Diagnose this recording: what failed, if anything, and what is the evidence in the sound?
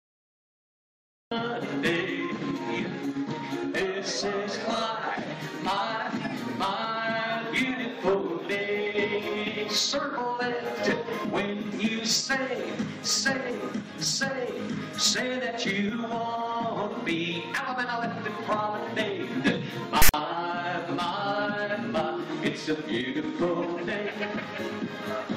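The failure is at the storage and playback stage: the decoder read a block of text file tags as if it were audio. From 20.02 to 20.14 s there is a hard-edged burst of rasping static, pushed to one side by the text bytes' offset, along with dead silence from the block's zero padding.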